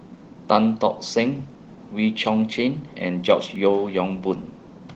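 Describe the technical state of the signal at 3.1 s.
At 3.1 s you're in the middle of a run of CD scratch ticks that lasts from 2.73 to 3.83 s. A blemish on the disc wipes out more data than the error correction can rebuild, once per revolution, so the player patches or mutes those samples. You get five short clicks here, the longest just a millisecond or two.

Underneath that, the whole clip carries Opus voice compression. The speech sounds muffled and slightly hoarse and robotic, which fits a low rate around 16 kbps, with a linear-prediction coder handling the lower band and a transform layer above 8 kHz. The damage is plainly audible.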